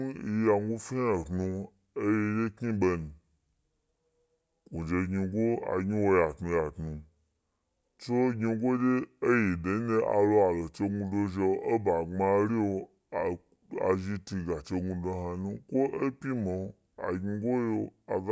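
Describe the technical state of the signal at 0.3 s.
At 0.3 s the speech carries a wrong sample rate fault, present for the whole clip. It plays at 0.726 times its proper speed, with pitch lowered by 5.55 semitones. That fits 22 kHz audio played back at 16 kHz. Voices sound low, slow and dragged.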